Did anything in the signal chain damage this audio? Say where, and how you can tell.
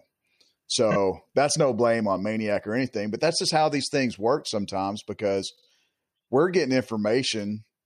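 Yes, repeated frames from codec or storage: a 26 ms chunk plays three times over at 0.90 s, and a 52 ms chunk likewise at 5.55 s.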